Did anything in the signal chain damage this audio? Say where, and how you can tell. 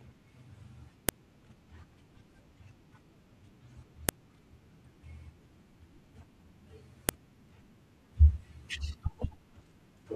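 Yes: sharp snaps at 1.09, 4.09 and 7.09 s, every 3 s regardless of the speech, mark a file header played as audio, where storage joined WAV pieces without stripping headers.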